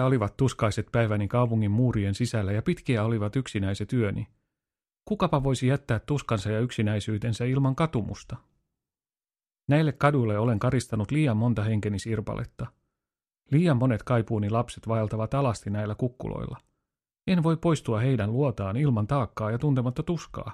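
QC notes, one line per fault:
No faults to note.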